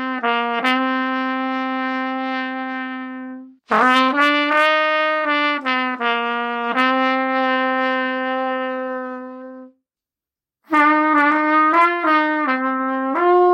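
No audible technical faults.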